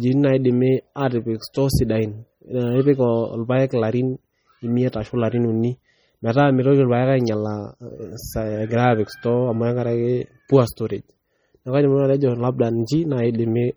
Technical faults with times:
0.00-13.76 MP3 compression
1.54 pre-echo

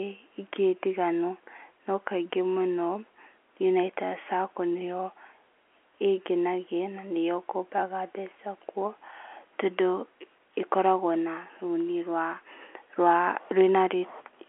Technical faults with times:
none

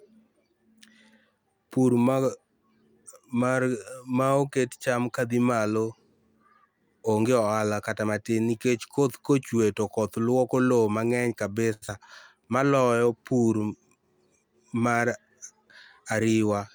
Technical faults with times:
11.73-11.84 short stall from a late packet
11.88-11.90 short concealed packet loss
14.78-16.15 jitter buffer speed-up

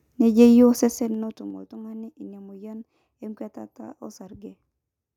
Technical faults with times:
0.74-1.58 zipper noise

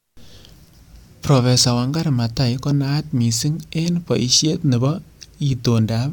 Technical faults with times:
none

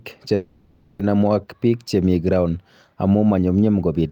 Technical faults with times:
0.35-1.01 call audio freeze

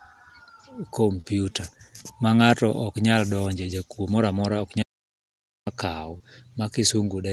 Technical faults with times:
1.21-1.26 short concealed packet loss
4.82-5.67 audio dropout to silence
6.18-6.22 short concealed packet loss

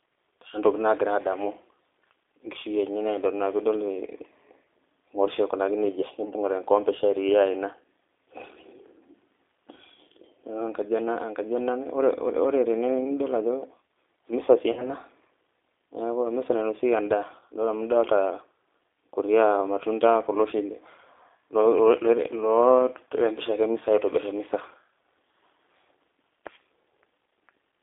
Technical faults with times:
0.00-27.83 G.729 codec
14.72-14.93 VoIP packet loss concealed by the speech codec

